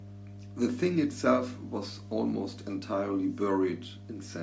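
Mains hum runs from start to finish beneath the speech, a steady low tone at 50 Hz sitting fairly high, roughly 15 dB under the speech. It comes from the power line leaking into the signal, through a ground loop or a transformer near the recording chain, and it stays constant through pauses and talking alike. The call's microphone processing leaves the band topping out at 8 kHz.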